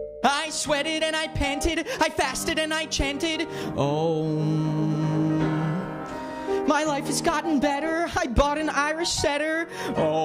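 A steady, high whine fixed at 8 kHz sits under the audio from 3.86 to 5.86 s, around 45 dB below the signal. This is USB whine: the bus draws current in 125-microsecond microframes, and that pulsing leaks into the audio path through power or ground.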